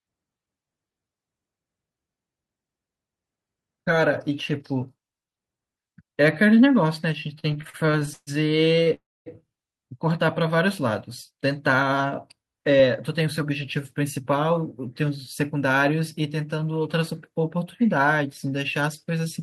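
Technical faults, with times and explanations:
7.39–8.29 s and 8.65–8.88 s, repeated stalls (stutter): the speech keeps catching and dragging. In the first stretch there are 15 little hangs, the longest about 138 ms, adding up to roughly a third of that span. The second has 4 shorter ones, none over 30 ms. Packets were turning up late, the jitter buffer kept running dry, and the receiver stretched the last bit of sound each time until it could carry on, so nothing's lost, it just stumbles.
8.94–9.28 s, call audio freeze: the sound hangs for about a third of a second. A brief fading continuation of the last sound leads into about 240 ms of silence, and then the speech picks up exactly where it stopped. The likely cause is packets held up in transit leaving the jitter buffer empty, so the receiver filled the wait and pushed everything after it back by about 319 ms.
10.25–10.67 s, jitter buffer slow-down: this bit runs at about 92% speed with the pitch unchanged, so sounds feel slightly drawn out. 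The buffer was low, so the receiver repeated single pitch periods or slivers of pause over and over, adding about 42 ms to rebuild its reserve.
12.64–15.71 s, jitter buffer speed-up: over these three seconds the speech runs about 5% fast and sounds a touch hurried, though the pitch stays put. The buffer was holding more than it wanted, so the receiver kept snipping out short pieces a pitch period or so long, around 150 ms in total, to bring the delay back down.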